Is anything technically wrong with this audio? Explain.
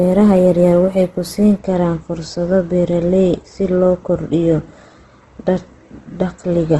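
Yes, there's Opus compression damage running through the whole clip, and it's plainly audible. The speech sounds rough and grainy, with a noisy texture where tones should be clean, and nothing comes through above about 12.1 kHz. That's likely the music-mode Opus encoder short on bits. It keeps each band's energy but fills the gaps with folded or noise-like content, which fits a low rate around 16 kbps.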